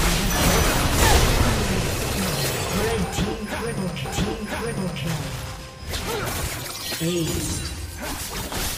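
At 4.04 s the playback jumps back and a stretch of about one second is heard a second time, running until 5.04 s. This is a stream segment repeated: the player fetched or queued the same chunk of the stream twice, so roughly 1.00 s of material is inserted again and everything after it arrives that much later. A short blip marks the discontinuity where the audio snaps back to the earlier point.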